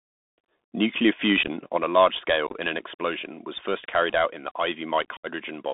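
Speech that sounds boxy and thin throughout, with nothing above about 3.6 kHz or below 200 Hz, scratchy s sounds, and a grainy hiss riding under the voice. This is the Bluetooth CVSD headset codec, whose one-bit up/down steps at a 64 kbit/s rate cannot track fast high-frequency detail and leave that granular noise behind. Three bursts of crackle and chopped holes come from unconcealed Bluetooth headset packet loss, where missing voice packets were replaced with silence rather than patched over. The first, at 1.43 to 1.48 s, loses about 26 ms in scattered gaps across 45 ms, none longer than 15 ms, which fits several lost packets. The second, at 2.47 to 2.54 s, between "a large" and "in an explosion was", drops about 49 ms spread over 75 ms, roughly fifteen packets. The third, at 5.17 to 5.27 s, is a denser dropout of about 68 ms, around twenty packets. At 1.77 s, just before "a large", the voice and background both fall abruptly by about 5 dB and stay there, most likely a microphone volume stepped down by call software reacting to a loud input.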